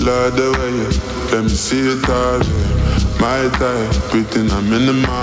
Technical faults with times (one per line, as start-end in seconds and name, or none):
0.00-5.22 gain pumping